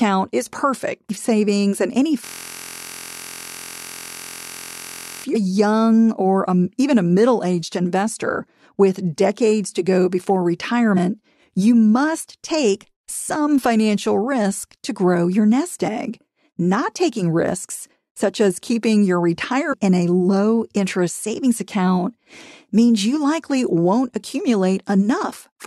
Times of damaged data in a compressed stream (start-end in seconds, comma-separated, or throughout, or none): 1.09, 5.34-5.36, 10.96, 19.72-19.74